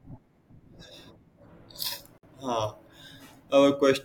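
Two separately encoded pieces of this speech were joined without trimming the encoder delay and final-frame padding, leaving a gap at a join of encoded pieces. At 2.18 s a silence of about 52 ms opens, with smeared edges, before speech resumes at 2.23 s.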